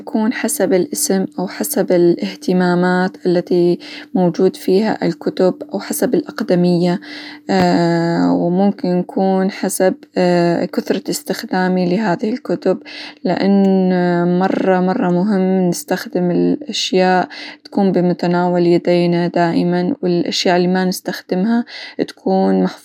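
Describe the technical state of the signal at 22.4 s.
At 22.4 s the signal is intact, with no dropout, distortion or other fault at that point.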